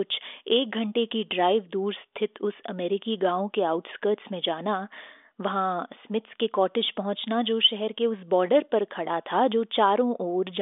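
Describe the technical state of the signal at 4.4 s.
At 4.4 s the audio is intact, carried over a G.726 ADPCM telephone path at 40 kbit/s whose band stops at about 3.7 kHz.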